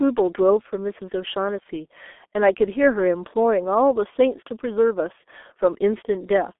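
Throughout the speech, the signal has passed through a G.723.1 codec squeezing it to a very low rate, consistent with about 6.3 kbit/s, over a telephone line band of 250 Hz to 3.5 kHz. Nothing survives above 3.8 kHz, so the speech sounds muffled and hoarse, with smeared consonants.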